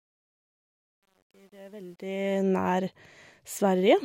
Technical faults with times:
0.00-2.43 truncation distortion on a fade

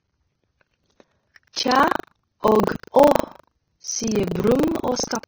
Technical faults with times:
0.00-5.27 Vorbis compression
0.00-5.27 buffer tearing
1.53-1.57 pre-echo
2.40-2.69 pre-echo

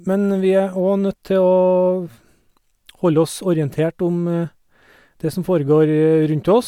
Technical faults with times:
none

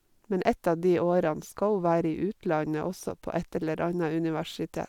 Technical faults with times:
none

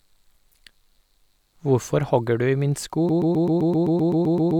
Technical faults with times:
3.09-4.59 broken-record loop

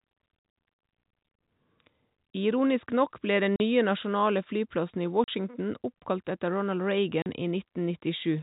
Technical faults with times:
3.56-3.60 packet loss filled with silence
5.24-5.28 packet loss filled with silence
7.22-7.26 packet loss filled with silence

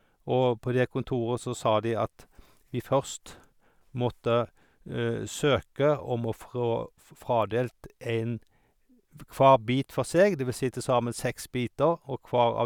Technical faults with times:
none

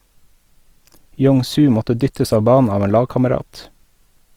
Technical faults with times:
0.00-4.37 Opus compression

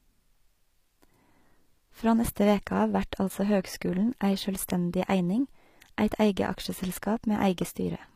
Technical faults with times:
0.00-8.16 HE-AAC compression

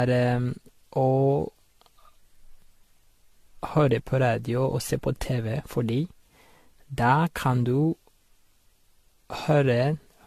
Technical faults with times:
0.00-10.26 generation loss

